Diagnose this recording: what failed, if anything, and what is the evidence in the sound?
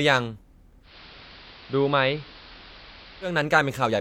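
Digital radio blending to analogue, 0.82 to 3.37 s, at the reception stage. The receiver lost the digital signal and cross-faded over 163 ms to the station's AM broadcast: the speech drops about 2 dB, and hiss rises to roughly 20 dB below the voice.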